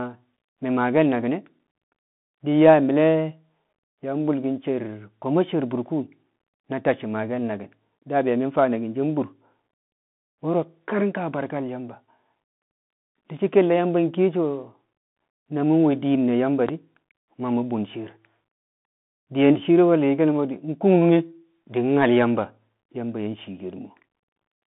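Across the whole clip the speech runs through a Bluetooth CVSD headset codec, confined to roughly 150 Hz to 3.6 kHz with nothing above 3.8 kHz. The one-bit delta coding, consistent with a 64 kbps link, leaves scratchy sibilants, overload distortion on loud bright sounds and granular hiss.

At 16.69 to 16.71 s a single loud pop, peaking roughly 10 dB above the speech, lands just before "di̱ ma mu̱ bun" while the speech carries on beneath it. It is likely a voltage spike from a plug, switch, static discharge or driver glitch.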